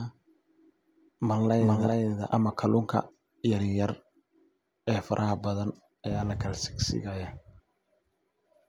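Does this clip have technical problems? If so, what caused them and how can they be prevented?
Yes. From the start to 2.32 s there's a doubled audio track: a second full-band copy of the speech, about as loud as the original, trailing roughly 0.4 s behind, then cutting out abruptly. It's likely a second capture path or an out-of-step edit layered in. To prevent it, record through a single monitored path and check edit points for stacked duplicate regions.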